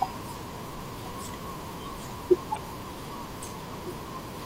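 At 2.55 to 2.57 s the speech is interrupted by a short blip of damaged data in the compressed stream. Corrupted bytes there cause the decoder to misread the frames, lose sync and hunt for the next valid frame header, producing a brief disturbance lasting about 26 ms.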